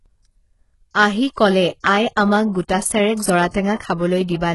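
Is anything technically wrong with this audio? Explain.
Yes. HE-AAC compression is likely throughout: treble above 11.5 kHz is missing, and the remaining highs are copied up from lower bands, leaving sibilants gritty and metallic, consistent with roughly 12 kbps.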